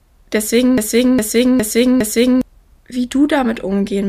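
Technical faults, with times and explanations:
0.78 to 2.41 s, broken-record loop: one 0.41 s fragment of speech plays four times back to back, identical each pass, and the speech due in that span is lost, likely from a stalled stream resending its last buffer. A spectrogram shows one block tiled every 0.41 s.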